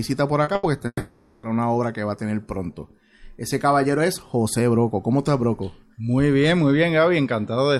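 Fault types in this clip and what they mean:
Short concealed packet loss: At 0.43 to 0.50 s, about 40 ms never arrived, and the receiver extended the preceding sound across the hole, leaving a brief smear before normal audio resumes.
Burst of packet loss: At 0.55 to 0.66 s, roughly 80 ms went missing in a row, heard as a held, fading continuation of the last sound, then a jump forward.
Long network dropout: From 0.87 to 1.46 s the sound stretches into a fading buzz or hiss, then about 40 ms of silence, with 560 ms of audio likely lost in transit.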